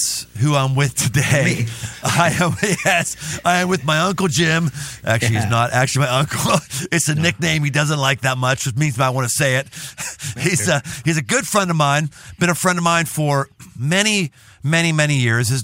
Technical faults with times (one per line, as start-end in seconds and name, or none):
0.00-6.61 video or display buzz